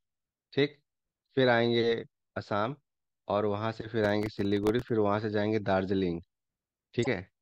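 From 4.05 to 4.89 s, processor overload crackle rides on the speech. The processor could not finish its small audio buffers in time, and it missed about twenty deadlines over that stretch. Each miss replayed a scrap of old audio with hard edges. The grit sounds fine-grained, which fits very short buffers of around a millisecond and a half. The tearing stops once the load passes.

From 7.02 to 7.07 s, there is damaged data in a compressed stream. Part of the encoded data there was wrong. The decoder misread the frames, lost sync and hunted for the next valid frame header. The result is a brief disturbance lasting about 50 milliseconds.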